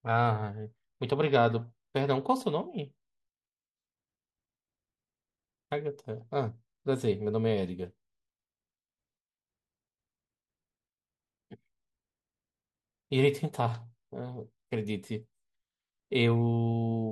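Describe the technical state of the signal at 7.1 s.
At 7.1 s the speech signal is intact, with no audible technical fault at that moment.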